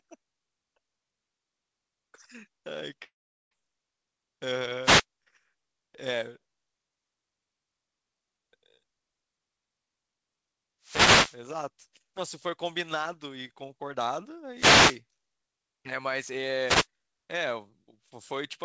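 From 3.04 to 3.53 s the speech breaks off in a long network dropout. About 0.48 s of audio is lost. The last sound smears into a fading buzz, then drops to near silence. This is likely a packet stream that stopped arriving. The speech resumes with that part missing.

Wireless microphone noise hits follow at 4.82 to 5.04 s, 10.82 to 11.39 s, 14.54 to 15.00 s and 16.65 to 16.87 s. Each is a short swish of static. The radio signal fades as reflections cancel, so receiver noise swells over the voice. The longest hit is the one at 10.82 s.

Nothing in the clip reaches above 8 kHz, which fits a G.722 call codec.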